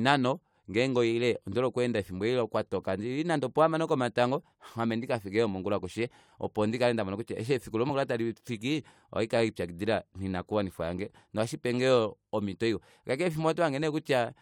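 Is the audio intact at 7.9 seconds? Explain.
No. Between 7.88 and 7.90 s, after "mone kutya eshi efiku" and before "talifiki ohandi kelipyakidila noinakuwanifwa", damaged data in the compressed stream makes the decoder misread frames and hunt for the next header, giving a brief chirp, squawk, click or short hole. A plain dropout would instead leave a silent gap.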